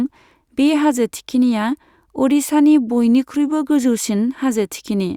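No technical faults can be heard anywhere in the recording, and the speech signal stays intact and continuous throughout.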